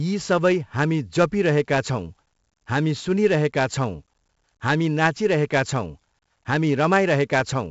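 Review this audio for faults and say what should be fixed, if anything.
The whole clip carries 4-bit ADPCM compression, and it's heavy. Every sample is coded as a coarse 4-bit step off a prediction, so the speech has a gritty hiss riding on it that swells with loud syllables, and sharp onsets get smeared where the step size can't catch up. There's also nothing above about 7.7 kHz, which fits a 16 kHz rate and roughly 64 kbps. To prevent it, keep the source as linear PCM at full rate, or use a modern codec.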